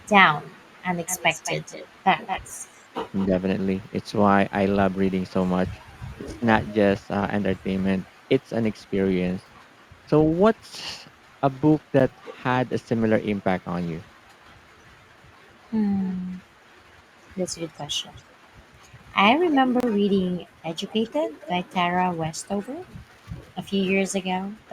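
From 1.05 to 3.27 s a delayed copy of the speech trails the original by 222 ms. It sits only a little below the direct sound. This is an echo leak. The far end is likely playing the call on a loudspeaker, and its echo canceller let part of the microphone pickup back into the line.

At 12.00 s the sound drops out for 9 ms and then resumes. This is a Bluetooth stall. The cause is likely interference holding up packets until the headphone buffer ran dry.

The echo leak returns in short bursts, now 267 ms behind the speech. It comes at 14.08 to 14.19 s, barely audible. It comes at 16.01 to 16.17 s, faint. It comes at 17.76 to 18.23 s, also faint. It comes at 19.45 to 20.13 s, clearly present. Within that stretch, from 19.80 to 19.83 s, a second Bluetooth stall cuts the audio to silence for 27 ms. The last echo burst, from 20.91 to 21.52 s, is again clearly present.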